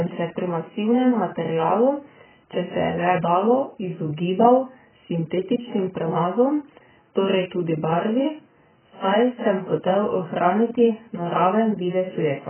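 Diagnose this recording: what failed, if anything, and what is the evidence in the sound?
The speech sounds dull and smeared throughout, with nothing above 3.1 kHz. The likely cause is heavy AAC compression at the codec stage, at a bitrate of roughly 9 kbps.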